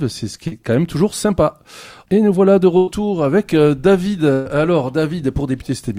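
At 0.47 to 0.53 s a brief smear interrupts the sound: short concealed packet loss, where about 40 ms never arrived and the receiver extended the preceding audio to bridge it. At 2.77 to 2.89 s and again at 4.33 to 4.47 s the sound stalls into a held, fading continuation and then jumps ahead. These are bursts of packet loss, where about 100 ms and then 120 ms went missing and were filled by extrapolation that decays as it runs.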